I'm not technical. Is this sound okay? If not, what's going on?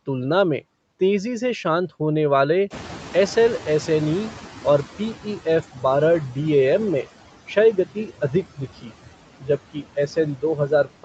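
No. Throughout the clip, noise suppressor artifacts come from a filter that pushes the background noise down moment by moment. The noise dips between words and swells underneath them.

The noise suppressor is also catching up from 2.7 to 5.63 seconds, right after "से शांत होने वाले". The room noise jumps around 2.5 seconds, and the filter is slow to notice, so the louder background comes through with less reduction at first and fades as it adjusts.

Speech is cut by the noise suppressor where it mistakes parts of the speech for background and turns them down. This happens at 5.73 to 5.84 seconds, just before "बारह डीएएम में क्षय", then at 7.85 to 8.62, 8.81 to 8.93, 9.4 to 9.49, 9.73 to 10.17, and 10.36 to 11.04 seconds. Those bits sound swallowed or faint.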